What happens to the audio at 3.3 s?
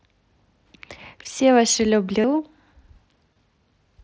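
A brief buzzy, steady tone replaces the audio from 3.34 to 3.36 s, with a slight warble as normal sound resumes. This is concealed Bluetooth headset packet loss: about 22 ms went missing, which fits a short run of three lost packets on the mSBC link. The receiver filled the gap by repeating the best-matching piece of the preceding waveform.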